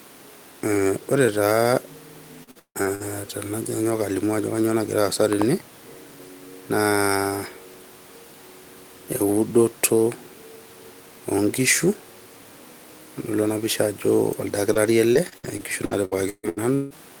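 Repeated packet loss (robotic sound) runs from 2.43 to 3.02 s. Five gaps hit in quick succession, the longest 157 ms, and about half of the stretch is concealment rather than received audio. Each gap is bridged by extending the last sound heard before the next one arrives, so the speech turns choppy and metallic, with pieces dropping out. A small portion, around 40 ms, was rebuilt from error-correction data instead of being guessed.

Short concealed packet loss follows at 14.74 to 14.78 s. About 20 ms of the call failed to reach the decoder in time, and the receiver filled the hole by continuing the preceding sound before blending back into real audio. It comes through as a brief smear or wobble, and a short consonant there can be lost.

A lost packet rebuilt from error correction sits inside that moment, at 14.75 to 14.77 s. The 20 ms frame was missing, but the following packet carried a low-bitrate copy, which the decoder played instead. 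That frame has no gap, but it sounds rougher and noisier than its surroundings.

Repeated packet loss (robotic sound) returns from 15.13 to 16.93 s, with nine gaps, the longest 158 ms, and about a third of the span concealed. Roughly 150 ms was recovered from error correction. The rest was patched by extension, giving the same broken, robotic texture.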